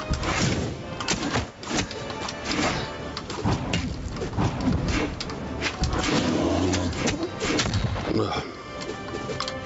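The level ducks by around 15 dB under each loud sound, a gain pumping effect likely caused by excessive input gain clamped by a fast limiter throughout, while the call path caps content at 8 kHz.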